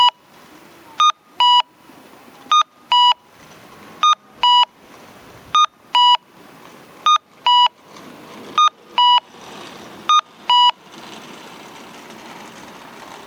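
Gain pumping runs through the whole clip: the gain swings by around 15 dB, pulled down under each loud sound, likely from gain set far too high with a fast limiter clamping it, so loud and soft parts end up closer in level and the sound is squashed. Unlike a noise gate, a limiter pulls loud sounds down rather than cutting quiet parts out.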